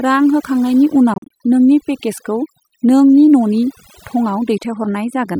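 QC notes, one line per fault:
Throughout: overdone noise removal. The suppressor was set too aggressively and gates bands near its noise estimate, leaving a lowered, twinkling background.
1.14–1.31 s: Bluetooth dropout, likely. Packets missed their deadline, so about 100 ms of sound drops out in short holes scattered over 0.16 s, the longest about 40 ms, before playback resumes.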